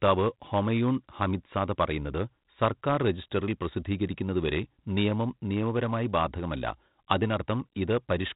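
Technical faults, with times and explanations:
Throughout: 4-bit ADPCM compression. Each sample is coded as a coarse 4-bit step from a predicted value, so the coding error rides on the signal as a gritty hiss that rises and falls with loudness, heavy here, with roughing on sharp onsets where the step size lags. The 32 kbps rate and the empty band above 3.8 kHz point to an 8 kHz sample rate, which also dulls the speech. On a spectrogram, everything stops flat at 3.8 kHz, and broadband noise fills the gaps between harmonics during loud passages.
4.07 s: bit error spike. A flipped bit in a few adjacent samples throws their values off by a power of two before they snap back, producing one sharp, dry tick that has nothing to do with the speech around it. On the waveform it shows as a lone needle-thin excursion. On the spectrogram it is a single thin vertical line spanning the whole occupied band.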